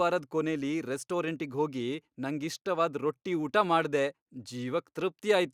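Speech recording with no audible technical faults at any point.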